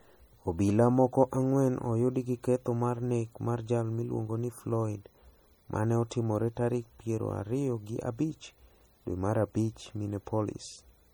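Throughout the speech, swirly MP3 artefacts persist even though content reaches 20.1 kHz, likely low-bitrate audio saved at a high bitrate, fitting a 48 kbit/s source re-encoded at 256.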